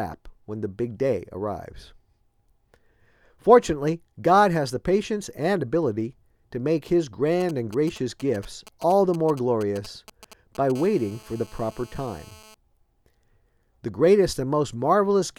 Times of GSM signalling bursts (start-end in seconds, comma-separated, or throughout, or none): 7.40-10.72